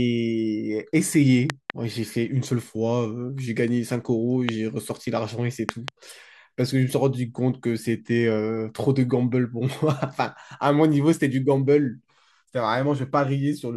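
Loud pops land at 1.50 to 1.72 s, 4.49 to 4.51 s and 5.69 to 5.90 s. The first and last are double. The speech continues underneath. Likely voltage glitches, far louder than the speech.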